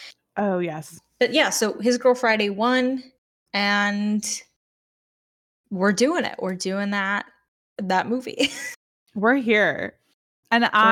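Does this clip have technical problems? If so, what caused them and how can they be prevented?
No, nothing in this speech clip stood out as a technical problem on listening, so there is no cause to trace and nothing to prevent.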